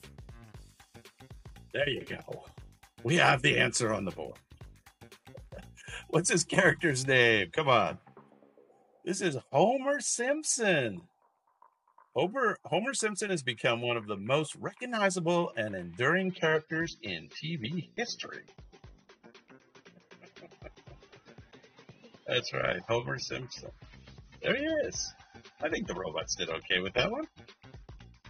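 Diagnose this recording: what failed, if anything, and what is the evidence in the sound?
The fault is an adaptive stream at a lower bitrate, at the network and codec stage. At 16.21 s the quality changes abruptly and stays degraded to the end. There is no gap or dropout. Above 6.3 kHz nothing remains, so the top end sounds dull, and codec artefacts increase. The player switched to a cheaper encoding when throughput fell. The sound fits AAC moving from around 96 kbit/s to about 24 kbit/s.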